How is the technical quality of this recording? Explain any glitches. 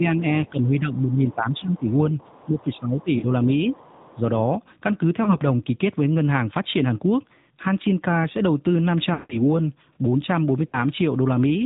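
The recording is degraded throughout by the narrowband mobile codec and shows several echo-control and frame-loss glitches.

AMR narrowband mobile codec (whole clip): nothing above 4 kHz survives, and the speech sounds buzzy and synthetic. The amount of damage fits a mid-rate AMR-NB mode around 10 kbps. Unlike plain low-pass filtering, it adds a coded, artificial texture.

Speech suppressed in double talk (0 to 1.89 s, 2.45 to 3.68 s, 4.15 to 4.24 s): the talker dips by about 10, 15 and 5 dB respectively. This is likely the echo canceller ducking while both sides speak.

Other side's voice leaking through (1.0 to 3.03 s, 3.72 to 4.19 s): a faint second voice about 30 dB down. Residual loudspeaker echo reaching the microphone is the likely cause. It is a distinct second voice rather than a smear of the talker.

Lost AMR speech frames (1.58 to 1.67 s, 3.18 to 3.25 s, 5.24 to 5.39 s, 9.14 to 9.40 s, 10.68 to 10.78 s): the decoder stretches the last good frame and fades it. 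The 9.14 s gap, about 160 ms, drags audibly toward silence before the speech returns weak or rough.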